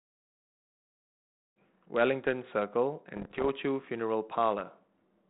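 From 3.16 to 3.49 s the speech breaks up with bit errors on an ADPCM link. The audio sits on a G.726 path at 32 kbit/s. Flipped bits, on the order of one in a hundred, throw off the decoder's step size and predictor, so each error rings on for a few milliseconds instead of clearing at once. What you hear is a third of a second of pops, rough gritty bursts and quick jumps in level, spread across what sounds like a run of a dozen or more damaged frames.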